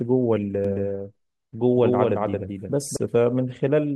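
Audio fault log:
0.65–2.97 s, doubled audio track: the speech gets a second, full-band copy trailing about a fifth of a second behind, sitting roughly 5 dB under the original, so everything sounds stuttered and smeared. There's no tail or room colour on the copy, and it cuts in and out abruptly at both ends. Likely the signal got picked up a second time through a slower path, or an edit left two copies overlapping out of step.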